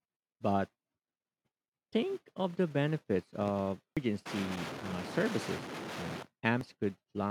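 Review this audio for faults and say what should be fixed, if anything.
Damaged data in a compressed stream occurs twice, at 3.97 s and again at 6.61 s. At each point the encoded bytes reaching the decoder are wrong, so it cannot parse the affected frames, drops out of sync and hunts for the next valid frame header before decoding resumes. In the speech this is heard as a brief chirp or blip at each time. Preventing it means checking the compressed file or stream for corruption end to end, using frame checksums and a reliable transfer.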